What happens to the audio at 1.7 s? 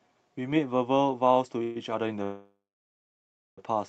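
Packets were likely held up in transit and the jitter buffer ran dry, causing a call audio freeze from 1.63 to 1.77 s. The last sound is drawn out as a fading buzz or hiss for 120 ms, then the audio resumes where it stopped, with nothing lost but delayed by 120 ms.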